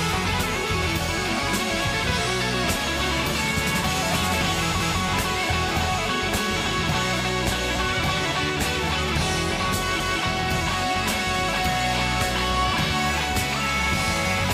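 At 4.80 s and again at 10.00 s, overlapping chunks cause a 200 ms stretch to play twice, heard as a click or stutter at each join. The audio was handled in 5.0 s chunks, and each new chunk began before the previous one ended.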